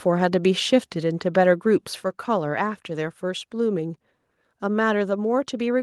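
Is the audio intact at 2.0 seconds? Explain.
No. At 2.04 s the microphone volume is stepped down: the speech and the background noise under it both fall by about 4 dB in a single abrupt step and stay at the lower level. The likely cause is the call software cutting the device's input volume because it judged the level too high. Unlike a smooth automatic gain ramp, the change is instantaneous, and unlike a dropout, the sound never breaks.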